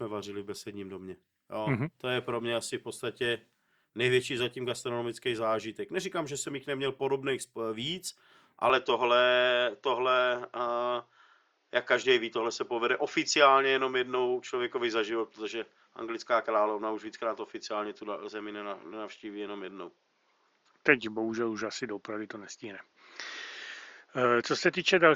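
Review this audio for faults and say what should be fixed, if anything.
From 8.70 s, right after "jich neměl podobných víc", the speech turns duller and narrower, with nothing above 7 kHz and a faint new noise floor, while the level barely changes and there is no gap. The likely cause is an input switched to a poorer device. To prevent it, lock the recording input to the intended microphone and disable automatic device switching for the session.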